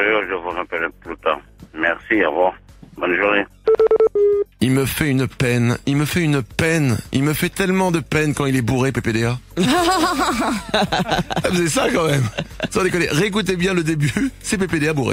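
No technical faults turn up anywhere in the recording, with nothing audible disturbing the signal at any point.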